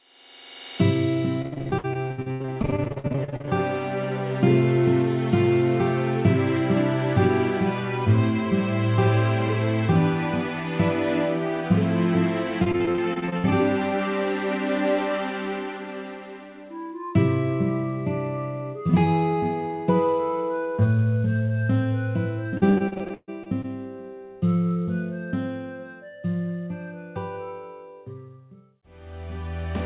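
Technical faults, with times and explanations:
1.42–3.49 s, 12.64–13.46 s and 22.58–23.66 s: repeated packet loss (robotic sound). Rapid short holes, longest 80, 60 and 137 ms, are filled by stretching the preceding sound, so 30–45% of each stretch is concealment, giving choppy sound with pieces missing within the call path's 4 kHz band.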